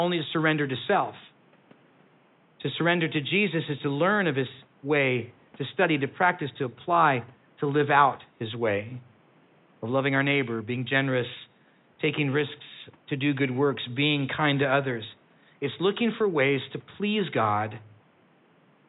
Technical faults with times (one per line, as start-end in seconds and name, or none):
none